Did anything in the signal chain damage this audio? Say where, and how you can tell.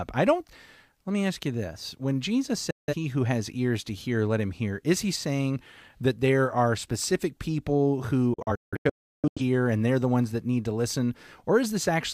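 Yes: a digital broadcast dropout at reception. The speech mutes from 2.71 to 2.94 s, then in scattered holes between 8.34 and 9.41 s, the longest 0.34 s. Each 3 ms-faded gap shows as a blank spectrogram column and flat waveform. The receiver muted failed frames, and their audio is lost.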